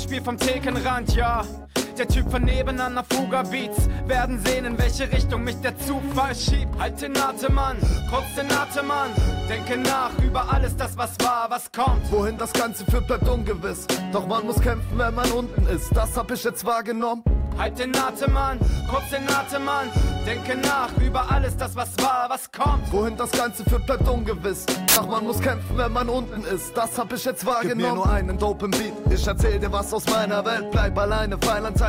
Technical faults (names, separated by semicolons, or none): samples built from the wrong bytes